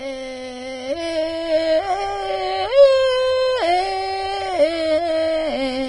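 Throughout the music, highs stop near 10.6 kHz and the treble turns hissy and grainy, with roughened tones and blurred attacks, likely heavy Vorbis compression at a bitrate near 27 kbps.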